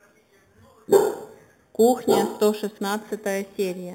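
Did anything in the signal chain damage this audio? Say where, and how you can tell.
Yes. The damage happened at a sample-rate conversion stage, and it lasts for the whole speech clip: imaging from sample-and-hold upsampling. A bright metallic fizz sits about 18 dB below the speech, occupying roughly 4 to 8 kHz. That points to an 8 kHz source raised to 48 kHz by repeating samples with no smoothing filter, which leaves mirror copies of the spectrum. Codec artefacts would not behave this way: the fizz rises and falls with the speech, and its lowest copy moves opposite to the pitch.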